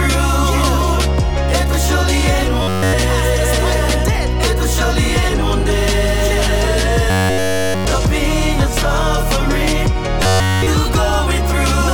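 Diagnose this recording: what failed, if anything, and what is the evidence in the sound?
Robotic sound from repeated short buffers appears at 2.62–2.93 s, 7.10–7.85 s and 10.23–10.68 s, with the sound collapsing into a fixed metallic buzz near 93.8 Hz. The failure is most likely at the driver or buffer stage. Fresh audio arrived too late, so the whole span is one fragment of about 10.7 ms looped over and over. Unlike codec warbling or network concealment, the pitch stays locked at one constant rate across all three events.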